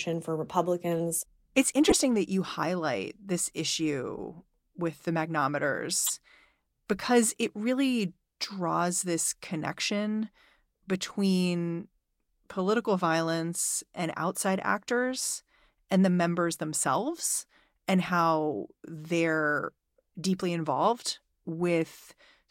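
Corrupt frame decoded at 1.87 to 1.92 s, 4.17 to 4.19 s and 6.04 to 6.10 s. Damaged compressed frames were played anyway, scattering energy at wrong frequencies. This produces brief squeaky bursts, the first loud at about −5 dBFS, the second faint at about −35 dBFS and the third around −15 dBFS.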